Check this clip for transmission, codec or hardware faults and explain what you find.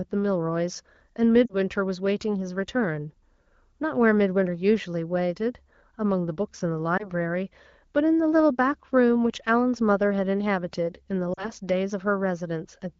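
Three brief dropouts break up the speech, all from lost AMR speech frames. At 1.45 to 1.55 s, 6.98 to 7.10 s and 11.33 to 11.51 s, the sound smears, sags in level and then returns weak or rough for a moment. This stands out against the clear wideband sound of the AMR wideband (HD Voice) codec. Radio errors made frames fail their checksum, so the decoder repeated its last good pitch and vocal tract settings at falling gain. Missing stretches of 40, 20 and 40 ms fit two, one and two lost 20 ms frames.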